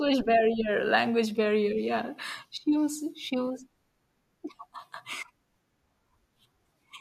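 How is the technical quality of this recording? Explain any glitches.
No glitches or faults detected.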